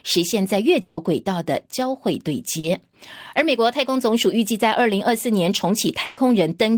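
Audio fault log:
0.81–0.99 s, long network dropout: The speech gives way to a smeared continuation of the last sound for about 160 ms. It fades rather than cutting to silence, and the speech picks up further on with that stretch gone. The likely cause is a network stall in which no audio arrived for that time. The receiver kept extending what it last had, so the gap is covered by a fading buzz or hiss and never drops to dead air.
2.59–2.65 s, short concealed packet loss: A brief smear of about 40 ms interrupts the speech. A few hundredths of a second of audio failed to reach the decoder in time. The receiver bridged the hole by carrying on the preceding sound, as a pitched tone if voiced or as shaped noise if not, then blended back into the real signal. A short consonant can disappear inside such a patch.
6.05–6.19 s, burst of packet loss: About 120 ms of speech is replaced by a held, dimming continuation of the sound before it. 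It does not fall to silence. Several consecutive packets were lost or arrived too late to play. The receiver stretched the last sound and lowered its level as the gap went on, giving a sustained buzz for voiced sound or a fading hiss otherwise. Playback then resumes further along, with the intervening speech missing.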